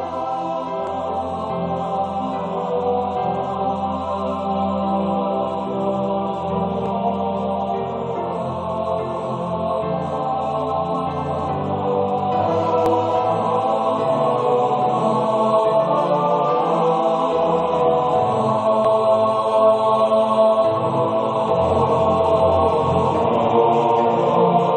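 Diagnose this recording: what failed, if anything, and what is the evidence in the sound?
The fault is an overlap between stream segments at the playback stage, where segmented stream pieces are joined. Short clicks or skips occur at 0.87, 6.86, 12.86 and 18.85 s, spaced almost exactly 6 s apart, which fits 6-second segments. At each boundary the time stamps of adjacent segments overlap, so the player discards the overlapping portion, removing roughly 12 to 19 ms of sound that was never duplicated. The waveform jumps discontinuously at each splice.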